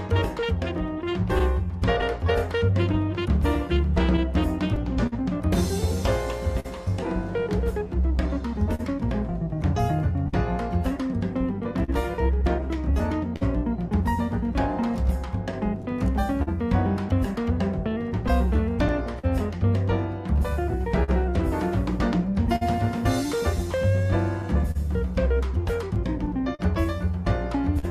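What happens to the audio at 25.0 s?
The sender's clock runs roughly 3% slower than the receiver's, a clock drift between sender and receiver that persists through the whole clip. The receiver's jitter buffer keeps draining, so at 25.0 s the audio carries the same small, unevenly spaced timing hiccups that recur throughout.

To stay in step, the receiver makes repeated timing corrections from 0.14 s to 26.19 s, stretching out short pieces that add up to around 150 ms. Each edit is tiny and irregularly spaced.

Scattered short gaps also fall between 24.42 s and 27.85 s. About seven packets went missing or arrived late, and the receiver covered each hole by continuing the last sound, filling around 150 ms in all, the longest gap close to 40 ms. Across this stretch this leaves brief ticks or smears in audio that stays largely clear.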